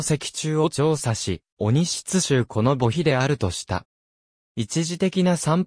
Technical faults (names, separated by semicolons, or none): none